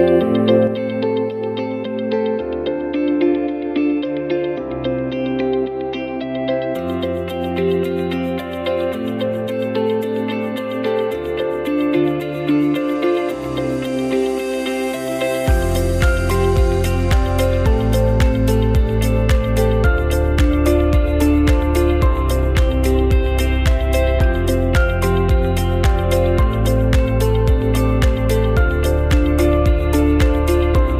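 At 0.67 s there's a sudden gain jump: the whole level drops by about 6 dB in an instant and stays down to the end. The background falls right along with the sound, which likely means a gain setting was applied without any ramp.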